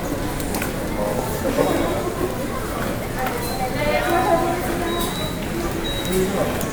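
No faults can be heard anywhere in the recording.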